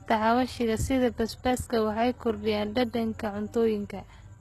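From start to finish the speech has a treble that sounds bright but wrong. Sibilants come out gritty and a bit lispy, with a metallic sheen, and nothing sits above about 12.3 kHz. That pattern points to heavy HE-AAC compression, likely at a very low rate on the order of 16 kbps, where only the lower band is really coded and the top is faked by copying lower bands upward. The harmonics up there don't line up with the real ones.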